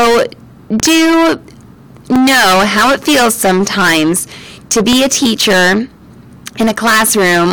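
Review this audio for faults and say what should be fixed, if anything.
The speech carries a harsh, buzzing fuzz on every loud syllable from start to end. This is hard clipping: the signal is driven about 27 dB past what a stage can pass, so nearly a third of the waveform is cut flat, adding dense high harmonics. To prevent it, lower the gain before the converter or the overloading stage so peaks stay below full scale.

Sharp loud pops sit on top of the speech, which continues beneath them. There are two in quick succession between 0.80 and 0.88 s, one at 2.16 to 2.18 s just before "how it feels sometimes", and one at 4.93 to 4.95 s between "it feels sometimes to" and "a teacher". They stand roughly 20 dB above the speech, the last about 15 dB, and the likely cause is sudden voltage steps from a plug, a switch, static or a driver glitch. To prevent them, secure the connections, ground the setup and avoid switching during recording.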